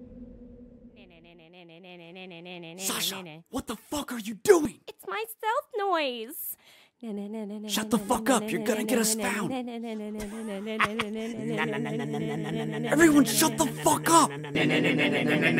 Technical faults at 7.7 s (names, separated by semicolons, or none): none